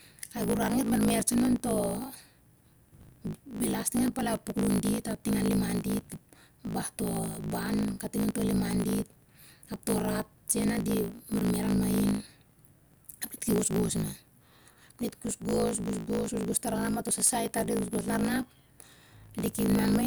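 It's a speech clip with a block size mismatch (truncated) running through the whole thing. You can hear a steady buzz at about 54.4 Hz, and the talking runs roughly 1.16 times too fast while the timbre stays about where it should be. That points to one stage handing over 1024-sample blocks while the next reads shorter ones, so the tail of every block gets chopped off and the seams buzz at the block rate.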